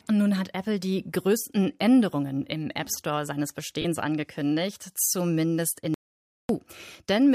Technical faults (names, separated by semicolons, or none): lost LE Audio frames; audio dropout to silence